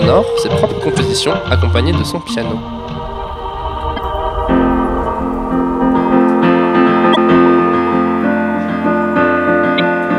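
Damaged data in a compressed stream corrupts four short stretches, at 0.96 to 1.00 s, 3.93 to 3.99 s, 7.12 to 7.17 s and at 9.78 s. Each time the decoder misreads bad frames and hunts for the next header, so the audio breaks into a brief chirp, squawk, click or short hole.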